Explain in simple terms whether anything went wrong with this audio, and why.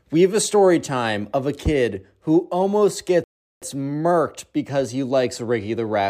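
The speech goes silent from 3.24 to 3.62 s, between "a kid who almost" and "murked because he likes": a playback stall, likely the player running short of data.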